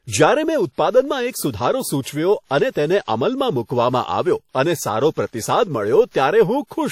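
Speech runs with plainly audible transform-codec damage throughout, likely WMA compression at a low rate consistent with about 48 kbps: washy ringing smears around syllables, and hiss breathes with the signal. A spectrogram would show patchy, holed high bands where weak components were zeroed.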